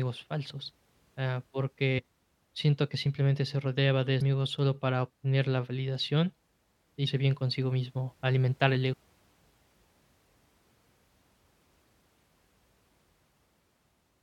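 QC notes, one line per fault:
1.98–2.00 s, 4.21 s, 7.06 s, 8.92–8.94 s: damaged data in a compressed stream. Brief glitches where corrupt frames break decoder sync until the next frame header is found.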